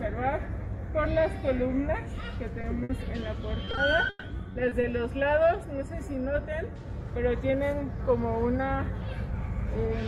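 At 2.61 to 2.65 s there is a short concealed packet loss: about 20 ms of audio never arrived, and the receiver extended the preceding sound to cover it. It registers only as a brief smear or wobble, isolated.

From 2.83 to 2.91 s a burst of packet loss leaves a 60 ms hole. Unlike the earlier smear, the continued sound hangs and fades as it goes. The audio then picks up further along, with that stretch missing.

Between 3.65 and 4.85 s the problem becomes repeated packet loss with a robotic sound. Eight separate gaps, the longest 140 ms, total about 280 ms, close to a quarter of the span. What sets this apart is the rapid recurrence of patches, which makes the sound choppy with pieces missing rather than producing a single dropout.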